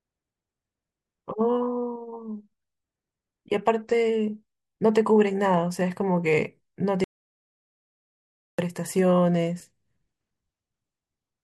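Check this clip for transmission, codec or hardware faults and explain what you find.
One transmission fault is audible: an audio dropout to silence from 7.04 to 8.59 s. The speech cuts off abruptly, about 1.5 s of sound is lost, and it resumes mid-flow. The cause is likely a lost input while the recorder kept writing zeros. A natural pause or noise gate would leave room tone or fade smoothly. This gap is silent with no room tone left.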